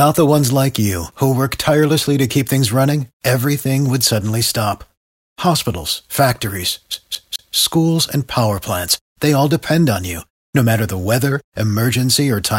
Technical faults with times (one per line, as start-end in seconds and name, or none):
6.94-7.56 CD stuck on one turn